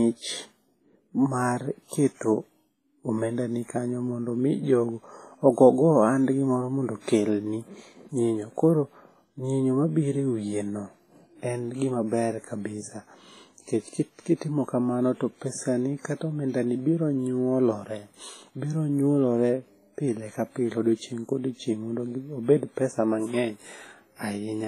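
Across the whole speech clip, heavy smearing and a washy, ringing hiss that swells and fades with the signal point to likely WMA compression, fitting a low bitrate near 24 kbps. Nothing survives above 15.4 kHz. Unlike steady background noise, this hiss tracks the sound itself.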